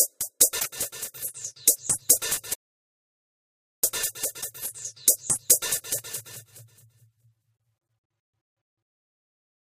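Damaged data in a compressed stream shows up twice in this recording of everyday sounds, from 0.56 to 0.66 s and again from 4.38 to 4.45 s. Each time a short chirp, squawk, click or brief hole cuts across the sound. Part of the encoded data there is corrupt, so the decoder misreads those frames, loses its place in the stream, and has to hunt for the next valid frame header before normal playback resumes. An audio dropout to silence runs from 2.54 to 3.84 s, removing about 1.3 s of sound. The audio stops abruptly and returns just as abruptly, and the gap between is silent with no background or room tone at all. Whatever happened acoustically in that stretch is gone. The likely cause is a momentary loss of the input signal, through a disconnect, a link failure or an accidental mute, while the recorder kept writing silence.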